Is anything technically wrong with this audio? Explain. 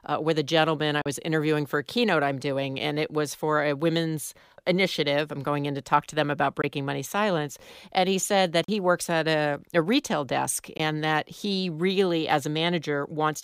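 Yes, there are four short Bluetooth dropouts in this speech. The first, at 1.02 to 1.06 s, cuts about 37 ms between "with a gentleman I" and "interviewing for a keynote". A shorter one, about 19 ms, hits at 6.62 to 6.64 s. Another 37 ms gap falls at 8.64 to 8.69 s between "he said that" and "he works at a", and the last, again about 19 ms, lands at 10.77 to 10.80 s between "a a retail desk" and "that he really". Each is a sudden hole of silence, and the speech picks up as though it kept running underneath. The cause is likely audio packets failing to reach the headphones in time, with gap lengths that fit one or two lost packets.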